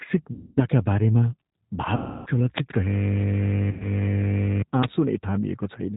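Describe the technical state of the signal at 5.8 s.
At 5.8 s the speech carries G.729 codec damage, present across the whole clip. The voice is rebuilt from a vocal tract filter, pitch predictor and sparse pulses, which fits 8 kbit/s. Nothing above 4 kHz survives. The result sounds plainly rough and synthetic.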